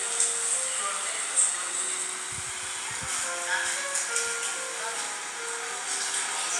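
Nothing stood out as a technical problem on listening to this recording.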